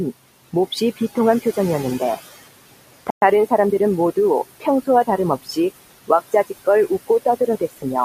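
Throughout the clip the room noise, which sits about 15 dB below the speech, pumps: it sinks between phrases and comes back up under them. These are noise suppressor artifacts. The suppressor pulls down whatever bands it judges to be steady noise by about 18 dB, recalculating frame by frame.

Between 0.71 and 1.17 s, parts of the speech briefly go faint and swallowed, dropping by up to about 15 dB over roughly a tenth of a second in total. This is speech cut by the noise suppressor: it mistook quiet speech energy for background and turned it down along with the noise.

At 3.10 s the sound cuts to complete silence for 117 ms, then resumes at 3.22 s. This is likely a Bluetooth stall, in which delayed wireless packets let the headphone buffer run empty until delivery caught up.

From 5.43 to 5.58 s the speech is suppressed again, with soft portions losing up to about 17 dB across roughly a tenth of a second. 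As earlier, the suppressor treated quieter speech as noise and attenuated it with the background.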